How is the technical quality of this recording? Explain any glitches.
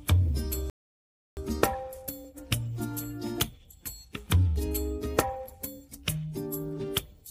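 The recording has one glitch. From 0.70 to 1.37 s there is a rebuffering stall: playback ran dry, fell silent for 0.67 s, then resumed seamlessly. This shows as a flat waveform gap and a blank spectrogram column.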